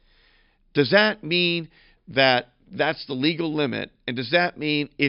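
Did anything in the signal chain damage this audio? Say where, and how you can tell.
No, nothing in the signal chain damaged this audio.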